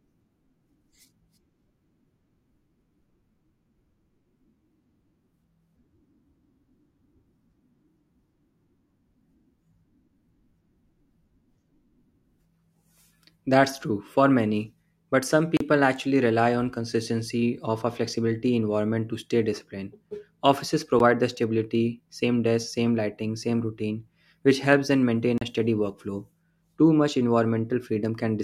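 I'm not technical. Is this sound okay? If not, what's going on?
No. There are three short dropouts, each a block of digital silence. The sound cuts to total silence and snaps back with no fade. The first is at 15.57 to 15.60 s, between "for many but some" and "actually rely on consistency". The second, shorter, is at 20.99 s, just before "the stability same desk". The third is at 25.38 to 25.41 s, between "which helps them maintain" and "a steady workflow". The computer likely didn't fill its audio buffer in time.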